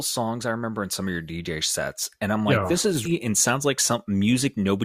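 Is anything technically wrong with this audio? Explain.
Yes. At 3.05 to 3.08 s, just after "like yeah this is", a stream segment was likely skipped when it failed to load, so the speech jumps ahead with a brief blip.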